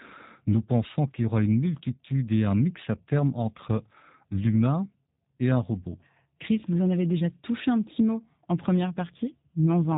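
From start to finish the speech carries G.729 codec damage, and it is plainly audible. The sound is rebuilt from a vocal tract model, a pitch predictor and a few pulses per short frame. Fine detail is lost. Nothing survives above about 3.8 kHz, so sibilants sound dull and narrow. The speech stays intelligible but turns rough and synthetic. That texture points to a G.729A stream at about 8 kbit/s.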